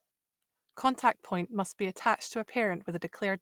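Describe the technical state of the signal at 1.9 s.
At 1.9 s the speech signal is intact, with no dropout, clipping, distortion or other fault to be heard.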